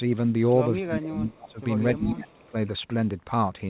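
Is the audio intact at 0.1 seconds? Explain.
Yes, the speech is intact at 0.1 seconds, with no fault at that moment beyond the ordinary narrow call-codec band that tops out around 4 kHz.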